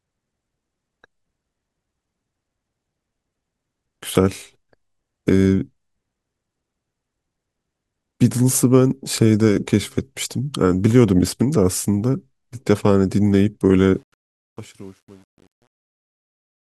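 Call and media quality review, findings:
Truncation distortion on the fade-out, 13.94 s to end of clip, worst from 14.4 s. Gain or fade stage truncating without dither, which fits about 9-bit word length. As the fade approaches the smallest step, the waveform collapses into coarse square steps. The fade, starting around 14 s and reaching bottom at 16.6 s, turns gritty in its tail.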